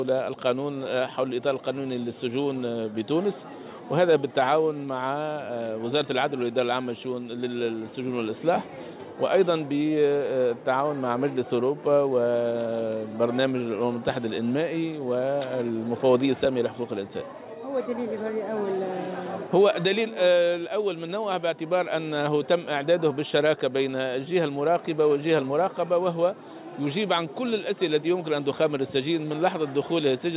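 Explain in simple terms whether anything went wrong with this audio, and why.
Nothing went wrong here; the sound simply went through an ordinary phone-style call connection, which is why everything above about 4 kHz is missing and it has that familiar narrow, telephone-like quality.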